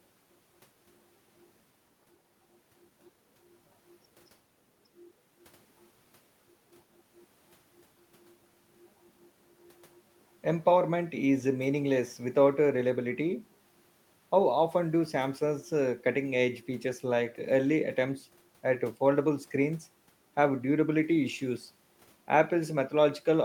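No technical faults can be heard anywhere in the speech recording, and the signal holds steady from the opening moment to the last.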